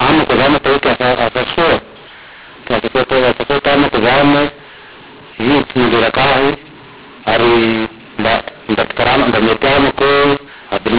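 From start to finish the speech carries a mu-law and A-law mix-up: the G.711 telephone signal, band-limited to 4 kHz, was coded with A-law but decoded as mu-law. Each 8-bit code maps to the wrong level, so loud passages sound harsh and gritty while quiet stretches are lifted into a hiss. On a waveform the pauses never reach zero, and the spectrogram shows broadband noise filling every gap below 4 kHz.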